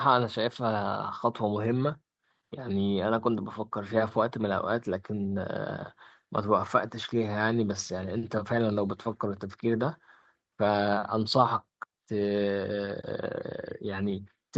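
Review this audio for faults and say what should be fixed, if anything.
Nothing here needs fixing, as no faults can be heard in the recording. The speech has been through a call microphone chain and an Opus call codec, and its content stops at about 8 kHz, which fits a wideband call setting at a moderate bitrate.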